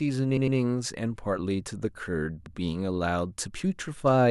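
Repeated frames occur twice. From 0.37 to 0.58 s, a 104.5 ms block, which fits four frames, plays twice more, and at 2.46 to 2.56 s it plays once more. Each repeat sounds like a stutter, and together they add 0.31 s overall.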